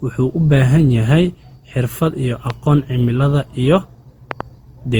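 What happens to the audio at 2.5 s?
A loud pop lands from 2.50 to 2.52 s, right after "xirfad iyo". It is a single sharp click, about 10 dB above the speech, and the speech carries on beneath it. A sudden voltage step, likely from a plug, switch or static discharge, was added to the signal.

Generation loss runs through this moment as well. The speech sounds swirly, smeared and hollow, and the attacks are blurred. That fits repeated lossy re-encoding, around five passes of something like Opus at 48 kbit/s, with fresh quantisation noise piling up on each pass.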